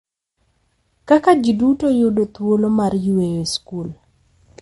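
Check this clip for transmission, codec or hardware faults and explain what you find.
One codec fault runs through the whole speech clip. MP3 compression is the likely cause: a starved encoder, consistent with roughly 48 kbps, removes everything above 11.2 kHz and drops weak detail, leaving dull, watery, swirling speech.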